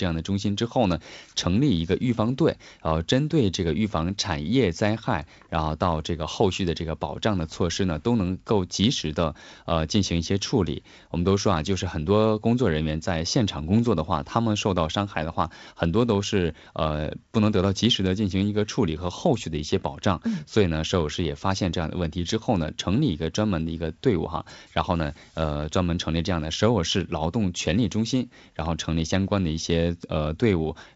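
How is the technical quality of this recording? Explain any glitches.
No glitches can be heard anywhere in this recording.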